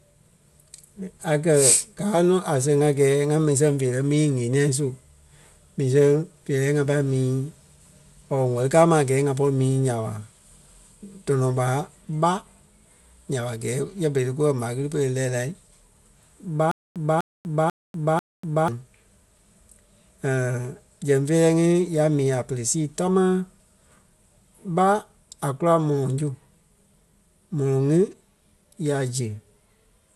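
Speech runs throughout with a dull, gurgling, granular texture and nothing above 12.2 kHz, the sound of likely MP2 compression at a low rate, perhaps near 80 kbps. Starved upper sub-bands switch off and flicker, and what survives is coarsely quantised, giving a grainier sound than the swirly smear of MP3. From 16.71 to 18.68 s there is a stutter with silent gaps, likely a stalling stream replaying its last fragment. The same 248 ms burst returns four times, each followed by about 244 ms of digital silence, a 492 ms cycle. Plain dropouts would leave gaps without repeating the same snippet, and the audio due in that span is lost.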